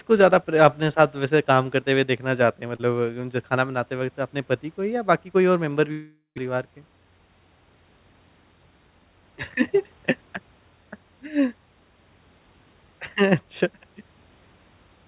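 From 5.92 to 6.45 s the speech dissolves into a fading buzz, then about 140 ms of silence, resuming with roughly 400 ms lost. That points to a likely long network dropout rather than a brief packet loss, since the concealment runs out.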